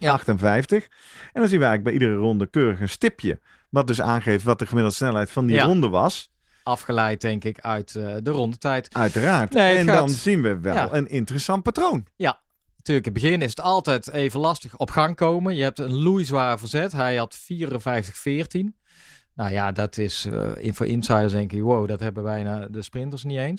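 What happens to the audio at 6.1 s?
Nothing goes wrong at 6.1 s: the speech carries on intact through that moment, with only the light, even coloration of its Opus voice compression, which fits a hybrid mode at around 20 kbps.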